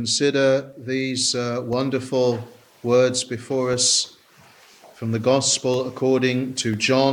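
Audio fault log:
0.73–6.74 s, periodic USB or driver dropouts: short gaps recur at a steady 1.0 s interval across this span, about seven in all. Each one drops around a millisecond of audio and leaves silence in its place. The abrupt cut to silence and the jump back to the waveform make a click or tick while there is signal. The even spacing points to a recurring task on the host that stalls the USB transfer or audio driver long enough to starve the stream briefly.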